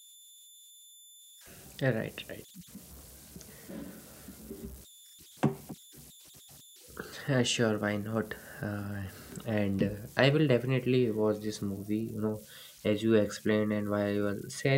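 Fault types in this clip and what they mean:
converter idle tones: throughout the clip, an undithered delta-sigma converter settles into repeating bit patterns whenever the speech gets quiet, leaving tones around 4 kHz in the pauses and a grainy layer under soft passages, about 25 dB below the speech.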